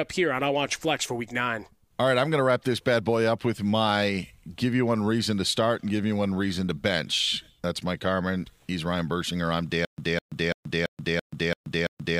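At 9.85 s the speech turns into a stutter with silent gaps that runs to the end of the clip. A fragment of about 205 ms plays, then about 131 ms of dead digital silence, repeating every 336 ms, seven times in all. The likely cause is a stalled player or stream replaying its last buffered piece on each retry. The evenly spaced true silences set it apart from a seamless loop, and the identical repeated burst sets it apart from simple dropouts.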